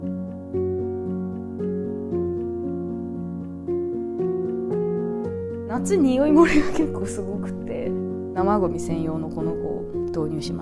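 No technical faults can be heard anywhere in this recording.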